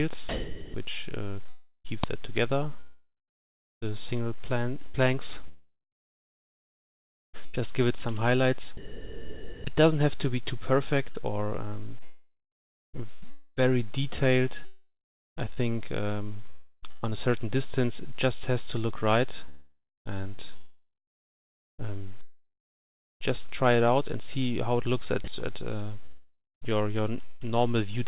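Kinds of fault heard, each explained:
Sound chopped by the voice detector: The sender's voice activity detection likely kept switching transmission off, so quieter parts of the sound were swapped for synthetic comfort noise. This happens across five stretches, 0.29 to 1.87 s, 2.80 to 9.69 s, 11.12 to 21.87 s, 19.49 to 23.23 s and 25.24 to 27.43 s. Between about 0.7 and 3.9 s is lost in each, leaving choppy sound with holes in it.
Uninitialised buffer: A playback block was sent out before any audio had been written into it, so whatever stale memory it held was played as if it were sound. At 2.04 s this gives a single loud crack lasting about 3 ms. That short length fits a 128-sample buffer, and the call's narrow band stops at 4 kHz.
Long network dropout: Audio likely stopped arriving for several hundred milliseconds, and the receiver covered the gap by stretching out the last sound it had. 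At 14.65 s about 0.72 s is missing. A fading fill gives way to roughly 0.4 s of silence before the sound returns at 15.39 s. At 16.50 s a shorter 0.33 s gap is bridged entirely by fill, and the lost portion never comes back.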